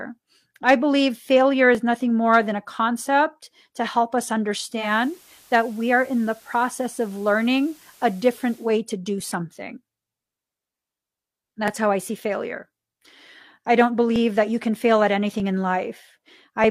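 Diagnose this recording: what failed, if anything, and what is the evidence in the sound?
Driver or buffer stage: from 0.51 s to 16.64 s, about fifteen short clicks land every 1.24 s with metronomic regularity. The likely cause is clock drift buffer slips, two clocks apart by several hundred ppm, each slip dropping or repeating a few dozen samples. Random dropouts would not keep this fixed spacing.

Reception stage: from 4.72 s to 8.74 s the receiver performs digital radio blending to analogue FM, cross-fading over about 0.2 s. Hiss rises to roughly 30 dB below the signal, and the level drops about 2 dB. Unlike a codec switch, it brings broadband hiss and a level change.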